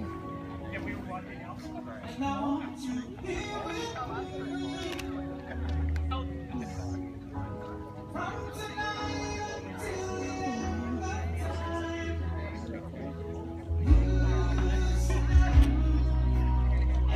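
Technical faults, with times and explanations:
No technical faults are audible.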